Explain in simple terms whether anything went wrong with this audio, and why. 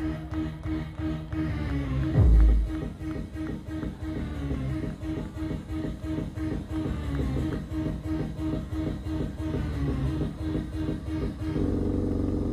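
Nothing went wrong with this audio, because no problems can be heard anywhere in it.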